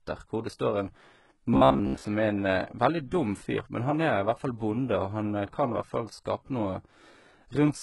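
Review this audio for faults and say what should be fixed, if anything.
Throughout the speech, the treble sounds synthetic: sibilants come out gritty and metallic. This is likely HE-AAC compression, with heavy damage consistent with a very low bitrate of around 12 kbps. Only the lower band is truly coded, and the upper band is rebuilt by copying it upward under a coarse envelope, so the harmonics there don't line up. On a spectrogram, the top band shows blocky, smeared patches repeating lower-band shapes. Encoding at a higher bitrate, or with plain AAC, would prevent this.

From 1.54 to 2.05 s the speech turns into a rigid, metallic buzz at 66.8 Hz that loosely tracks the syllables. This is robotic sound from repeated short buffers, likely caused by audio arriving too seldom, so the playback fills gaps by repeating a segment of about 15 ms, most of that stretch being repeats. On a waveform, identical cycles repeat every 15 ms. 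On a spectrogram, evenly spaced harmonic lines sit 66.8 Hz apart. Larger jitter buffers or steadier delivery would prevent it.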